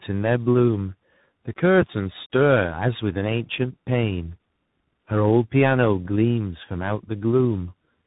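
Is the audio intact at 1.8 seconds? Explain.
No. A sudden voltage step, likely from a plug, switch or static discharge, adds a single loud pop from 1.81 to 1.84 s, standing about 10 dB above the speech, which carries on underneath. Meanwhile, tandem speech coding is at work: iLBC, then G.711, then CVSD each decode and re-encode the previous coder's output, leaving speech rough, warbly and muffled, with nothing above 3.8 kHz.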